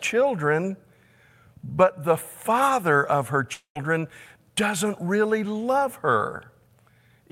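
After "the father of her", 3.53–3.77 s brings a fading buzz, then silence; 0.22 s is lost, likely to a long network dropout.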